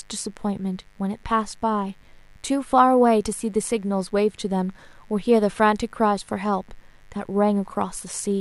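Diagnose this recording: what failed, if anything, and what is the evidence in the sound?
Analogue wiring failed. A steady, raspy mains buzz sits well beneath the speech throughout. Spikes twice per 50 Hz cycle spread harmonics up into the kilohertz range.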